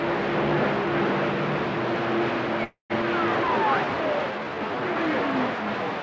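At 2.64 s there's a call audio freeze lasting until 2.92 s. The last bit of sound gets stretched into a fading buzz or hiss, then about 140 ms of silence, roughly a quarter-second gap overall. Likely packets got held up and the jitter buffer ran dry. Nothing's lost; the audio picks up where it stopped.

Right after, from 3.02 to 3.04 s, there's a skip ahead. Around 150 ms of audio was dropped while later material was already queued, so playback jumps forward and the two sides butt together almost directly.

Then from 3.48 to 4.81 s comes a jitter buffer slow-down. The receiver repeated single pitch periods or bits of pauses to rebuild its reserve, adding 146 ms. The sound runs at about 90% speed with unchanged pitch, and things get drawn out. Throughout, nothing reaches above 8 kHz, consistent with a G.722 call path.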